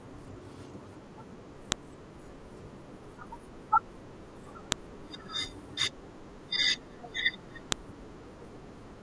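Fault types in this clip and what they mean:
File header played as audio: the speech was assembled from separate WAV pieces about 3.0 s long, and each piece's header was left in place instead of being stripped. Those header bytes are then read as sample values, which produces a sharp, loud click at every join regardless of what the speech is doing. The clicks fall at 1.72, 4.72 and 7.72 s, evenly spaced at the 3.0 s piece length.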